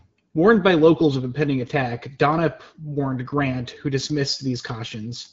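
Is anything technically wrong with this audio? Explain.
No, nothing is technically wrong.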